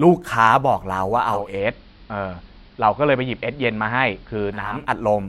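At 1.18 s the digital radio blends to analogue AM over 436 ms. Level drops about 2 dB, and faint hiss appears. It returns at 4.93 s.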